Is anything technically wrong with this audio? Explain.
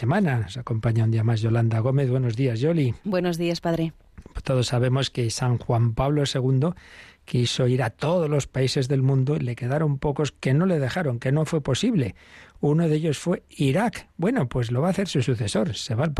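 No, nothing technically wrong stood out on listening to this speech recording.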